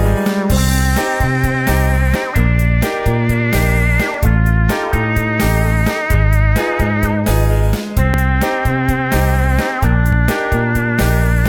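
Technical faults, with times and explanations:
2.16–2.18 s, 4.14–4.18 s, 8.14–8.16 s, 10.13–10.16 s: overlap between stream segments. About 25–40 ms is cut at 2-second segment joins, making waveform jumps, with thin vertical spectrogram lines.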